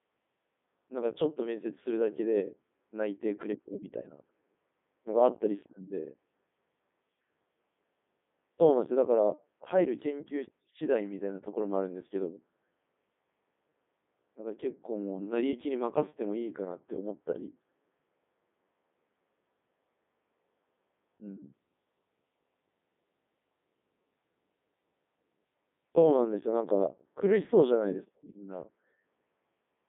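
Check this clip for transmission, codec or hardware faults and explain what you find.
The speech carries one codec fault, present from start to finish.

Codec 2 vocoder, throughout: the voice is rebuilt from sine waves from pitch, voicing, energy and spectral envelope, not the original waveform, so it sounds robotic and buzzy. The heavy damage fits the 3.2 kbit/s mode. The band runs roughly 200 Hz to 3.6 kHz, with nothing above 3.8 kHz.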